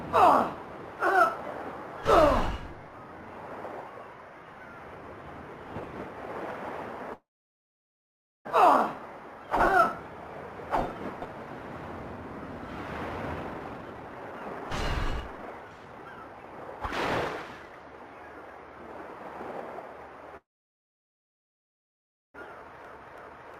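At 7.13 s the sound stops being live and the last fragment is carried on as a brief fading buzz or hiss that drops to silence within about 0.1 s. Nothing new arrives until 8.47 s, when the audio resumes where it left off. This is a call audio freeze, likely from packets held up in transit until the jitter buffer ran dry. About 1.32 s of gap was inserted, none of the original sound was lost, and everything after it is delayed by that amount.

From 13.17 s to 16.79 s a jitter buffer speed-up follows. Playback runs at about 136% with the pitch unchanged. The receiver trims many short pitch-period pieces to work off the built-up delay, roughly one and a half seconds in total, and the passage sounds clearly hurried.

The same freeze pattern repeats from 20.37 s to 22.36 s, a gap of about 1.97 s that is silent for nearly all of it, again likely caused by a buffer underrun from late packets. A milder speed-up then runs from 22.62 s to 23.59 s at about 112%, removing only a small fraction of a second.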